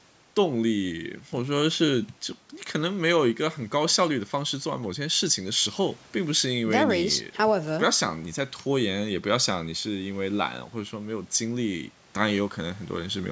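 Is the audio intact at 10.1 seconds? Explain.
Yes, the speech at 10.1 seconds is intact, with only the normal call microphone processing audible as a band limit that leaves nothing above 8 kHz.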